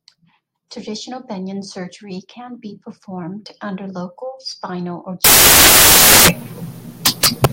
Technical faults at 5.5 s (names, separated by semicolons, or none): samples built from the wrong bytes